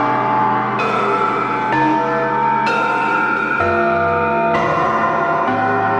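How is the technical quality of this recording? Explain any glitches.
No glitches or dropouts are audible anywhere here.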